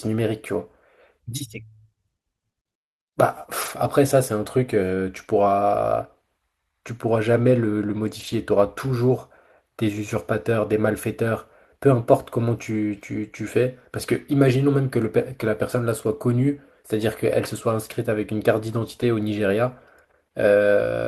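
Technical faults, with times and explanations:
3.61–3.71 s, 8.19–8.33 s and 19.01–19.03 s: lost packet rebuilt from error correction. The speech continues without a gap but turns briefly rough and noisy, which fits three, four and one separate lost packets replaced by the low-bitrate copies carried in the packets that followed.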